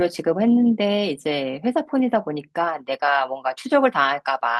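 No technical faults turn up anywhere in this speech recording, so there's nothing here to flag.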